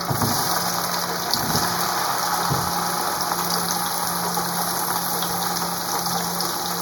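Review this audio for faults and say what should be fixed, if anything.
One channel runs a fraction of a millisecond late before the mono sum, giving channel delay (comb filtering) throughout: hollow, phasey sound with a fixed notch near 3 kHz. Align both channels to the same sample before summing to mono.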